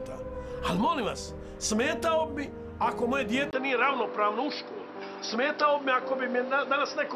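The recording's input likely switched to a poorer device at 3.51 s, and the audio stays on it to the end. A brief dropout of about 20 ms marks the changeover. From then on nothing above 5.7 kHz gets through, so the sound turns duller and boxier. The level holds roughly steady, but a faint new background noise appears well below the signal, belonging to the replacement input rather than the original one.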